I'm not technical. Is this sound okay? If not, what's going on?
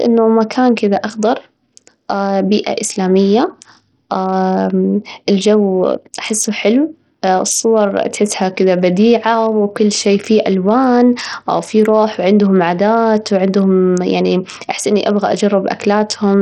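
No. The speech has been squeezed through Bluetooth SBC compression for its whole length, most likely by a wireless link using that basic codec with very little data to spare. Short of data, it starves the highest frequencies and handles the rest roughly. The result is heavy damage: nothing survives above 17.1 kHz, the crisp top flickers in and out, and a gritty, grainy roughness clings to the speech from start to finish.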